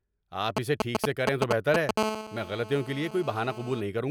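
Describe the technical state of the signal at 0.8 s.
GSM signalling bursts run from 0.57 to 1.91 s, covering 0.8 s. A nearby 2G phone exchanging signalling with its network emits short radio bursts that the audio circuit rectifies. The result is a galloping dit-dit-dit of short 217 Hz buzzes, roughly 5 dB above the speech.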